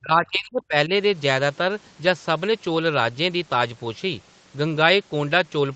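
From 0.0 to 0.9 s the speech dips and breaks up in pieces, about 0.7 s in all, sinking by around 25 dB at its deepest before coming back. This is most likely speech suppressed in double talk: with both sides talking at once, the echo canceller could not tell the local talker from loudspeaker echo and turned both down. Unlike packet loss, the dips have no glitches or synthetic fill, just turned-down speech that returns once the overlap ends.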